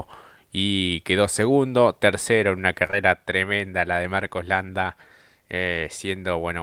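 At 2.87 to 2.91 s and again at 2.91 to 2.95 s, two back-to-back short concealed packet losses occur: about 20 ms of audio arrived too late each time, and the receiver extrapolated the preceding speech to cover it. The result is a brief smear rather than a silent dropout or hard click.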